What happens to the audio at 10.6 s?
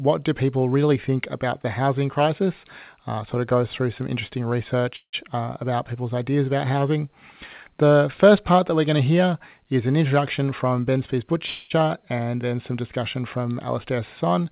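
At 10.6 s the audio is inside a jitter buffer speed-up lasting from 10.09 to 11.36 s. The receiver trims repeated pitch-period slices to shed excess buffered delay, about a tenth of a second in total, so the sound runs 8% faster and hurried at unchanged pitch. A spectrogram shows harmonics at the same frequencies but compressed in time, and a waveform shows periodic cycles packed closer without gaps.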